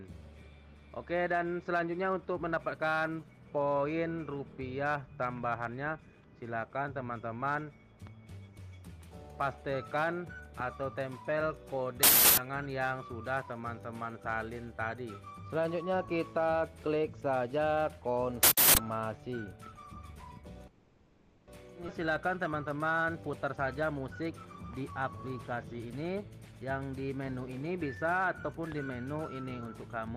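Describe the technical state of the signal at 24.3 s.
At 24.3 s the sound runs hurried, about 10% fast at an unchanged pitch. This is a jitter buffer speed-up lasting from 23.06 to 26.82 s: the receiver trimmed many short pitch-period slices to drain excess buffered audio, cutting roughly 0.4 s in total.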